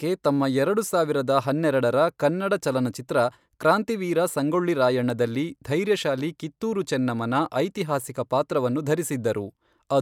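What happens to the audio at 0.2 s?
Nothing goes wrong at 0.2 s; the speech runs on intact there, with no dropout, click, distortion or other fault at that moment.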